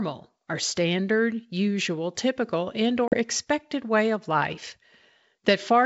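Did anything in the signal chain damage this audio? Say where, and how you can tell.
Yes: packet loss on an ADPCM call, in the network stage, at 3.08 to 3.17 s between "usual typical and" and "expected way of life". A hard-edged 40 ms silence, about two packets, leaves the decoder's predictor and step size mismatched, so the speech returns slightly distorted before settling.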